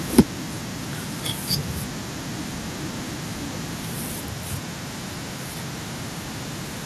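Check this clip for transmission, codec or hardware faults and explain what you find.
Two faults are audible, both right at the start of the speech.

Microphone overload, 0.18 to 0.20 s. A loud peak turns harsh and crackly. The input gain was likely set too high. The signal runs about 9 dB past the converter's limit, so roughly a third of the samples have their tops flattened.

Microphone volume stepped down, at 0.19 s. Voice and background drop suddenly by about 2 dB. The cause is likely the call software reacting to that distorted peak. It cut the device's input volume in one step, during the clipping.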